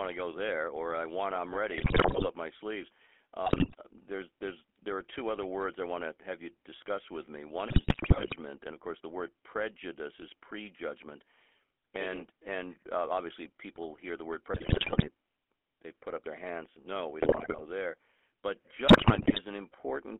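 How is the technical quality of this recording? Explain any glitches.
The speech carries a constant codec roughness and is broken up by six short bursts of corruption, so the technical quality is poor.

GSM full-rate codec: For the whole clip the speech sounds buzzy and gravelly within a narrow band of 300 Hz to 3.4 kHz, which fits 13 kbps GSM full-rate coding. The codec rebuilds the voice from a vocal-tract filter driven by a sparse, regularly spaced pulse excitation, which produces that coarse texture.

GSM bit errors: The speech breaks into squawks, pops and gargling at 1.78–2.28 s, 3.46–3.75 s, 7.68–8.34 s, 14.54–15.09 s, 17.20–17.62 s and 18.88–19.41 s. Corrupted bits reached the decoder, garbling the filter, pitch and gain values, so each affected frame comes out distorted or suddenly loud.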